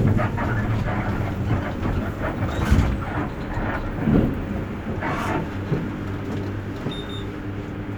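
No technical faults are audible anywhere in the recording.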